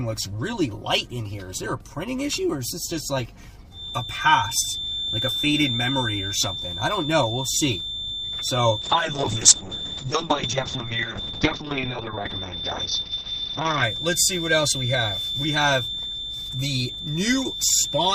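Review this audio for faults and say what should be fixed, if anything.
A feedback whistle at 3.6 kHz starts at 3.69 s and runs to the end of the clip. It sits only a little below the level of the sound and swells and fades slowly in level. The likely cause is a loudspeaker-to-microphone loop sitting just at the edge of feedback, so that one frequency keeps ringing without building up. On a spectrogram it appears as a thin, unbroken horizontal line at 3.6 kHz. The waveform shows no obvious change. To prevent it, reduce speaker-to-mic coupling or gain, or enable acoustic echo cancellation and a feedback suppressor.

A call bitrate drop runs from 8.82 s to 13.89 s. During it the sound turns coarse and muffled, and after about 5 seconds at the low point it returns to full quality. This fits the encoder falling from about 48 kbps to around 6 kbps after the bandwidth estimate collapsed. At that rate the codec cuts the top end, so a spectrogram shows the energy above 6 kHz disappearing abruptly, with a flat ceiling across that span. 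To prevent it, stabilise the network path or set a sensible minimum bitrate in the call's congestion control.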